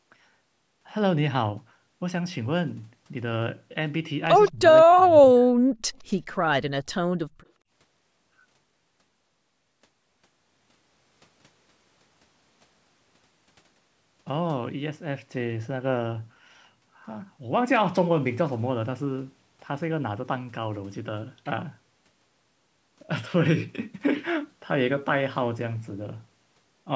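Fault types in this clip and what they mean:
Echo leak: At 4.47 to 4.51 s a brief, faint scrap of delayed sound surfaces, trailing the original by 165 ms and sitting roughly 25 dB below the speech. The likely cause is a far end playing the call through a loudspeaker, where the echo canceller failed to fully subtract what its microphone picked back up, so a residue was returned down the line.
Speech suppressed in double talk: The speech abruptly sinks and partly drops out from 4.51 to 4.61 s and again from 4.81 to 5.25 s, falling by something like 25 dB at its deepest, so syllables come through hollow or vanish in pieces. This is likely an echo canceller that, with both sides active at once, couldn't distinguish the local talker from loudspeaker echo and clamped down on everything it heard.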